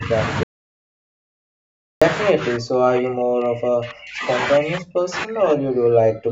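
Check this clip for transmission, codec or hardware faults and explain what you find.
Two kinds of fault are present: repeated speech suppression in double talk, and one audio dropout to silence. The call microphone processing works as expected, with nothing above 8 kHz, which fits a 16 kHz sampling rate.

Speech suppressed in double talk occurs at 0 to 0.15 s, 2.3 to 4.29 s and 4.59 s to the end. The level dips by about 15 dB at first, then by about 40 dB in the later spans. The likely cause is an echo canceller mistaking the near talker for loudspeaker echo while the far side was also talking, and attenuating both.

An audio dropout to silence runs from 0.43 to 2.02 s, losing about 1.58 s of speech. The sound cuts off abruptly into silence with no room tone, then resumes mid-flow. The likely cause is a lost input or link while the recorder kept writing silence.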